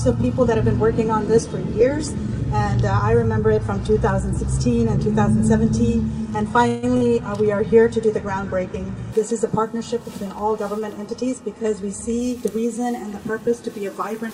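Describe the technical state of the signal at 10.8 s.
At 10.79 s there's a short stall from a late packet, running to about 10.83 s. A packet didn't show up on time, the jitter buffer ran dry, and the receiver stretched the last bit of sound for 18 ms until it arrived. Then playback picked up right where it left off, so nothing's actually lost, just 18 ms of added delay. What you hear is a tiny hold on the sound, with a faint buzzy edge or a slight dip.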